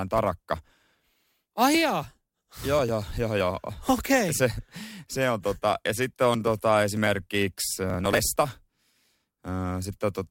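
From 7.90 to 8.36 s the speech is overrun by processor overload crackle: the system keeps failing to deliver its audio buffers on time, and the missed ones, which point to blocks of around 10 ms, are simply skipped, roughly twenty of them in under half a second. Each skip splices the waveform with a hard jump, heard as gritty tearing. A spectrogram shows thin vertical broadband streaks across that stretch, and the waveform shows repeated abrupt discontinuities.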